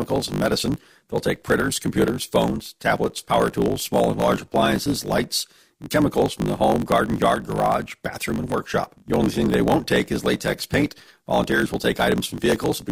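A speech clip with a block size mismatch (truncated) running the whole way through. There's a steady 50 Hz buzz, and everything plays back about 1.16 times too fast. One stage is handing over longer blocks than the next one takes in, so the tail of every block gets discarded. The buzz is the rate at which those cuts land, and the skipped audio is what speeds things up. The sizes involved fit roughly a 1024-sample block being written.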